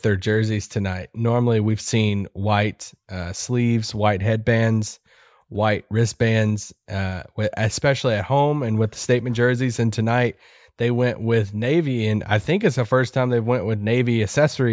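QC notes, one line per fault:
No faults heard.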